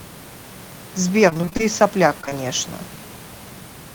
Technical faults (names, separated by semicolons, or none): repeated packet loss (robotic sound); short concealed packet loss